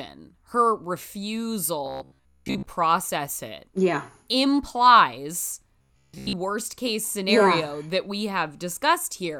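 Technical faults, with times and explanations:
1.86 to 2.66 s and 5.79 to 6.35 s, robotic sound from repeated short buffers: new audio likely arrived too slowly, so a roughly 15 ms slice was looped over most of the incoming speech, stamping a rigid 66.7 Hz metallic buzz that only loosely tracks the words.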